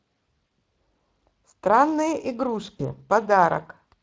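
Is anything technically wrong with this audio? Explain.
Yes. Speex codec coding is audible throughout the 4-second speech clip. This CELP codec models the voice with a predictive filter and a compact excitation signal. The damage here is plain, with a rough, hoarse, noisy texture laid over the speech. That grain fits a Speex setting of roughly 20 kbps, where the excitation cannot fully follow the real signal, so fine detail is replaced with coarse approximation.

VoIP packet loss concealed by the speech codec occurs at 0.49 s and again from 2.77 to 2.82 s. Each gap fits one lost 20 ms packet. With no data arriving, the decoder keeps extending its last pitch and filter state while lowering the gain. The dropout is heard as a short buzzy or coloured smear that fades. Because each frame builds on the previous one, the voice stays weak or distorted briefly after packets resume.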